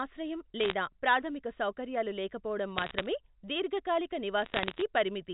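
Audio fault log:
0.60–0.73 s, 2.78–3.06 s, 4.42–4.81 s: bit errors on a digital phone line. Crackle rides over unchanged speech, before "ప్రాథమిక సౌకర్యాలు లేకపోవడం" and then after it. Roughly 0.4 to 0.5 percent of bits flip. Each flip corrupts one sample. Sign or high-bit hits tick sharply.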